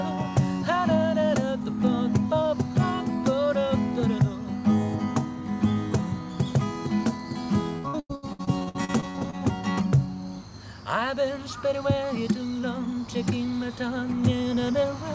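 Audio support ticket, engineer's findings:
Repeated packet loss (robotic sound), 7.78–9.35 s: 15 short gaps, longest 98 ms, about 40% of the stretch concealed. Jitter buffer is repeating the last frame into each hole, giving choppy output with pieces missing. Spectrogram shows smeared, repeated blocks. Waveform shows copied segments and dips. Band limit at 8 kHz throughout points to a G.722 call path.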